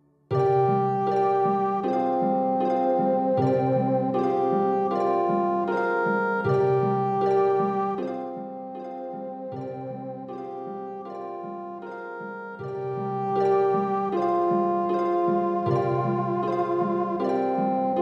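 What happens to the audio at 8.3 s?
Zipper noise runs from 7.87 to 8.45 s. The level drops about 10 dB in unsmoothed steps, roughly forty a second, each adding a faint tick.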